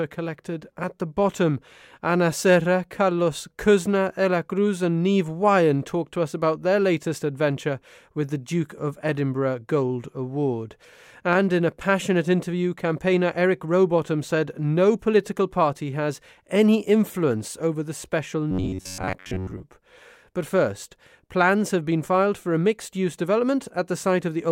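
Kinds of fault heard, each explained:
Robotic sound from repeated short buffers: new audio likely arrived at the playback stage too slowly, so the software filled each gap by replaying the fragment it had just played, about 10.7 ms long, and skipped the real material. From 18.51 to 19.64 s, most of the speech is replaced this way. The constant repetition imposes a steady buzz near 93.8 Hz, turning the voice into a stiff, metallic drone that only loosely follows the speech.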